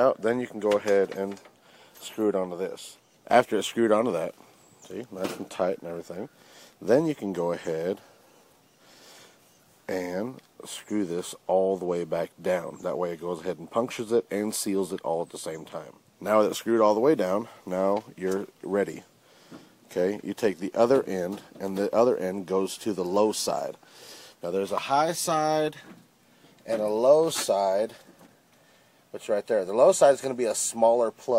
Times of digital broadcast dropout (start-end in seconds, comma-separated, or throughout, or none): none